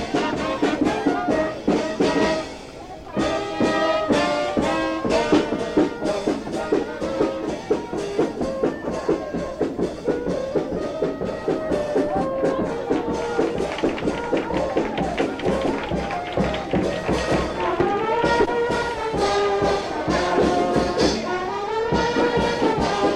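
Near the very end, from 22.72 to 22.74 s, compressed frames are skipped: a short run of encoded frames never reaches the output, so the audio lurches forward by roughly 70 ms, which fits a gap of around three frames. The join where the audio resumes comes across as a brief disruption. A waveform shows a seam with no silent gap. A spectrogram shows a sudden discontinuity in the patterns.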